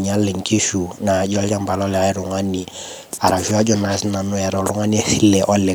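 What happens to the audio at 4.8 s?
Nothing goes wrong at 4.8 s; the speech plays through that moment intact, with no dropout, click or distortion.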